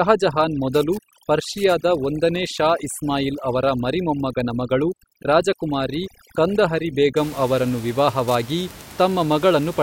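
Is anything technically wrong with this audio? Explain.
Yes. From 0.0 to 7.17 s there's overdone noise removal: the denoiser, set too hard, shuts off bands near its noise estimate, so the background breaks up into twinkling specks where the room noise, about 17 dB below speech, should be.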